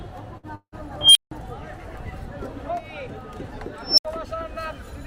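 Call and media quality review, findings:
Burst of packet loss, 0.37–0.46 s: short held buzz/hiss fading out for about 57 ms, then the audio jumps ahead, about 60 ms gone. Jitter buffer's concealment stretching the last frame over a few lost packets.

0.55–0.75 s: concealment fade for about 170 ms, then about 60 ms of dead silence, then the audio resumes with about 180 ms missing. Likely a long network dropout. Receiver kept extending the last frame, gave up, and went quiet.

Unstable filter, 1.01–1.31 s: a tone around 3 kHz swells over about 143 ms into a loud squeal, clips, then cuts to silence for about 163 ms. Recursive filter in the processing chain blew up on bad coefficients, overflowed, and reset.

Unstable filter again, 3.83–4.05 s: a squeal around 5 kHz, build-up about 147 ms, then about 70 ms of silence. Same runaway-and-reset behaviour, different pitch.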